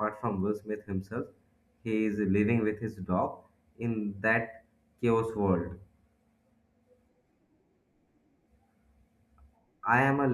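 Nothing in this recording stands out as a technical fault, so there's no glitch to point to anywhere along the way.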